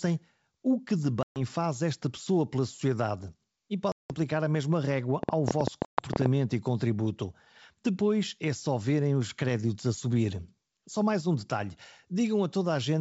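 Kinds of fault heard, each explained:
Packet loss on an ADPCM call: Three hard-edged silent gaps, 130 ms near 1.23 s between "o que de" and "faz esta pessoa pela", 180 ms near 3.92 s, and 130 ms near 5.85 s before "e contributo". The decoder's predictor and step size lose track of the sender's, so the sound returns distorted before settling. A waveform shows flat blocks, and a spectrogram shows blank vertical strips.
Train of clicks: From 5.23 to 6.27 s, ending before "e contributo", about fifteen similar pulses arrive at uneven spacing, averaging 11.7 per second and standing roughly 15 dB above the signal. They are likely from interference or a faulty connection. They appear as sharp spikes on the waveform and thin full-height lines on a spectrogram.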